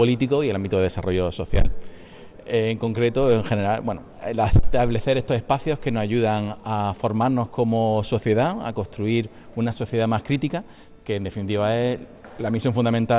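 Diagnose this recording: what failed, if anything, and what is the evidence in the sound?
Nothing failed; no stage shows any audible fault.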